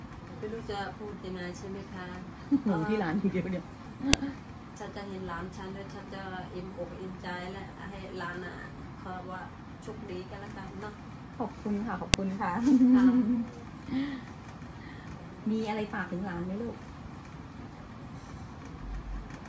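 At 4.13 s and again at 12.14 s there's a sharp, loud click, the file header played as audio. The pieces were joined without stripping their WAV headers, so those bytes play as samples, snapping in at each 8-second piece boundary regardless of the underlying sound.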